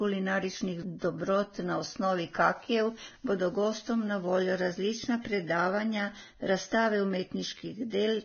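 Vorbis compression runs throughout, likely the cause of the hissy, grainy treble and missing content above 6.5 kHz. The heavy damage suggests a very low bitrate, near 17 kbps.

Pre-echo at 0.99 to 1.02 s: block-spread quantisation noise leaks about 30 ms ahead of a sharp onset, a brief hiss that leaves the attack smeared.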